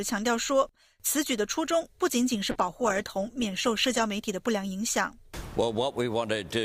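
From 2.53 to 4.13 s there's a call bitrate drop: the sound turns coarse and watery, consistent with the encoder falling from about 64 to 20 kbps, then recovering.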